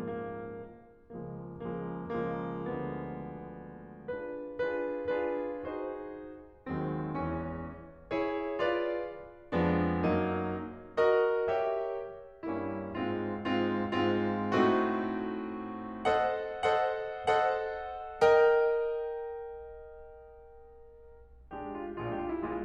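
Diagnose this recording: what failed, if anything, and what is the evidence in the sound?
Nothing failed: there is no evidence in the sound of a fault at any stage of this music recording.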